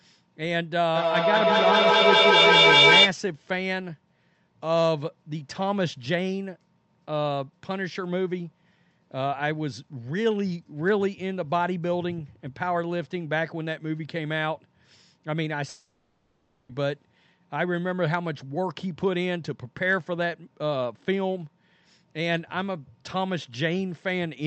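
From 0.95 to 3.17 s there is feedback echo between two devices: each word returns roughly every fifth of a second, growing to about 9 dB above the speech instead of fading like ordinary room echo. From 15.69 to 16.71 s a long network dropout is the likely cause of a fading, buzzy continuation standing in for a lost second, with no clean silent gap.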